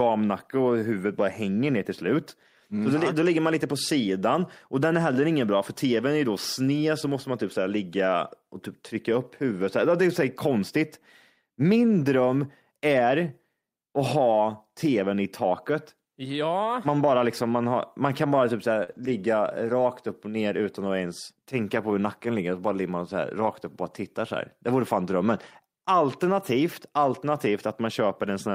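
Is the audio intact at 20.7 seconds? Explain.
Yes, at 20.7 seconds the speech is intact, with no dropout, click, distortion or other fault.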